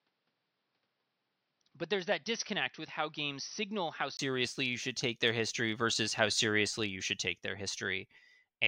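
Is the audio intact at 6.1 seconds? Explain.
Yes, the audio is intact at 6.1 seconds, with the speech continuing there without any audible fault.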